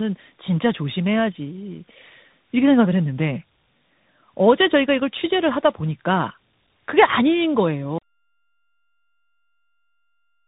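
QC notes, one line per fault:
Throughout: tandem speech coding. Speech sounds rough, muffled and warbly, with nothing above 3.8 kHz. This fits an AMR-NB stage followed by a CVSD stage. The second coder re-encodes the first coder's already degraded output, so their artefacts stack and the speech ends up duller than either would leave it alone.
7.98 s to end: audio dropout to silence. The speech cuts off mid-flow and the remainder is silent, with no room tone at all. Total silence rather than a fade points to the input likely being lost while the recording continued writing empty samples.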